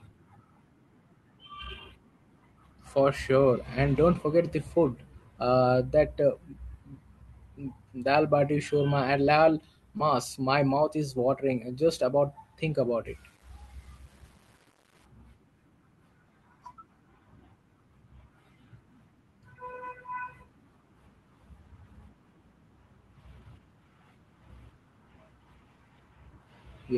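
Short concealed packet loss at 9.97 to 10.02 s: about 20 ms of the call's speech arrived too late for the decoder, which carried the preceding sound forward for roughly 21 ms before blending back into the real signal, leaving a brief smear or wobble.

Low bit depth without dither from 13.06 to 15.05 s: the speech turns grainy, with a gritty distortion that tracks its level, sitting around 35 dB below the signal. This is likely rounding to very few bits without dither, fitting a 9-bit signal.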